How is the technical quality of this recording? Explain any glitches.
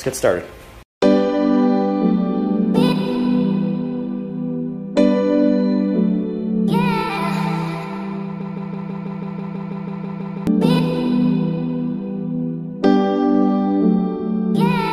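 One clear glitch affects the recording: a broken-record loop from 8.41 to 10.47 s. The player or stream likely stalled and kept resending its last held fragment, so a 0.16 s piece repeats exactly, back to back, 13 times. The audio for those two seconds is lost.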